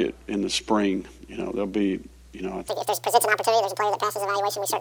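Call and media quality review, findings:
Section at the wrong speed, 2.68 s to end (4.81 s): audio abruptly doubles in speed, pitch rising roughly ten semitones. Likely cause: resampler or player clocking this segment at twice its recorded rate, so tempo and pitch shift together.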